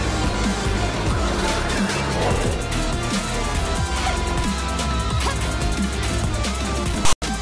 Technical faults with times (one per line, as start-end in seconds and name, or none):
7.05-7.22 file tags played as audio